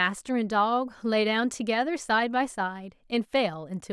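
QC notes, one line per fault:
No faults heard in this speech clip.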